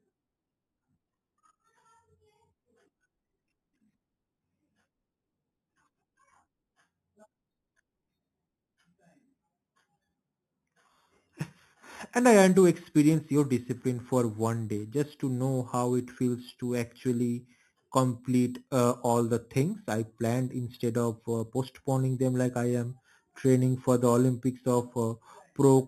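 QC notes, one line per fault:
Throughout, imaging from sample-and-hold upsampling: 8 kHz audio raised to 44.1 kHz by repeating samples unfiltered, leaving mirrored speech at about -20 dB from 4 kHz up, heard as metallic fizz.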